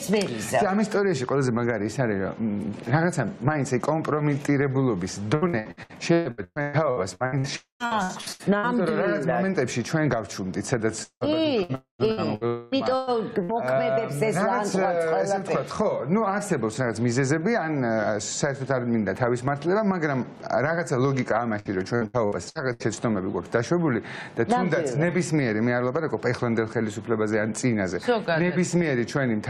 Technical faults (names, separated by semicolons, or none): repeated packet loss (robotic sound); long network dropout